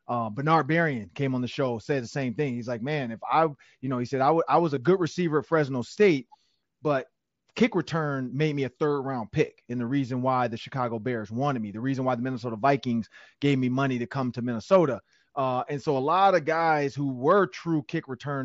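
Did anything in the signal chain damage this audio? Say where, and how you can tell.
Yes, there's a touch of concealed Bluetooth headset packet loss on the wireless link at 4.76 s, between "I was" and "good receiver at". About 7.5 ms went missing, which fits a single dropped packet. The receiver patched the gap by repeating a closely matching stretch of the preceding waveform, so it's nearly invisible, just a faint blip. The mSBC headset codec around it stays within its 8 kHz band.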